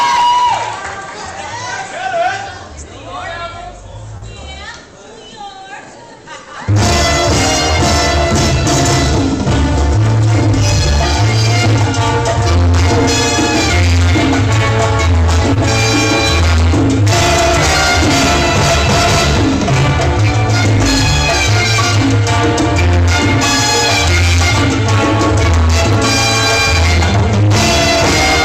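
At 4.17 to 4.24 s and again at 15.54 to 15.58 s there is a short stall from a late packet. The jitter buffer ran dry, so the receiver held the last sound for 44 ms and then 21 ms and resumed at the same point. Unlike a dropout, no audio is skipped; the sound briefly freezes with a faint buzz or dip, and playback then runs that much later.

Around 25.91 to 25.95 s, chunks play out of order: one 20 ms chunk arrived a chunk late and plays after the one that should follow it. Nothing is lost or held, which separates it from a stall, but the three hard joins give a brief jumbled moment.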